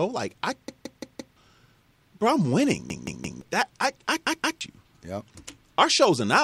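Repeated buffer at 0.68–1.37 s, 2.90–3.41 s and 4.27–4.61 s: new audio failed to arrive in time, so the device replayed its last block, a piece of about 0.17 s that fits an 8192-sample buffer. Each time the same fragment of speech stutters with a hard join at every repeat, four extra times, then three, then two, and the speech jumps ahead, with roughly 0.7 s, half a second and 0.3 s missing.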